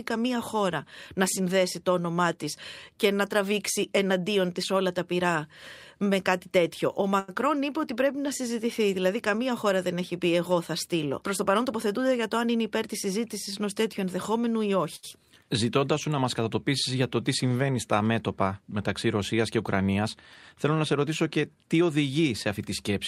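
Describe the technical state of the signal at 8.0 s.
The speech at 8.0 s is intact, with no fault audible at that point.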